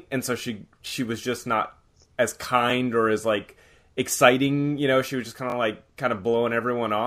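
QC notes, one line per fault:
0.88–0.92 s, repeated buffer: just after "and so she", a single short slice of audio plays twice more, giving a 40 ms stutter with a hard join at each repeat before "was just not as". This fits a 20 ms buffer replayed while fresh audio arrived late. Nothing seems lost; the sound is only held back.
5.5–5.54 s, repeated buffer: the same 40 ms stutter after "she was just kind", two extra plays of a 20 ms slice, then resuming at "of like kind".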